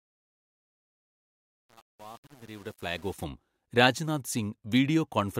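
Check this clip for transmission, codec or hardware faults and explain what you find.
The opening fade, from 0 to about 3.24 s, has truncation distortion. Whatever stage applied the fade kept too few bits and added no dither. At the quiet end of the fade each level change snaps to a coarse step, so the waveform turns into blocky squares. That makes the early part gritty, and the roughness fits an 8-bit path.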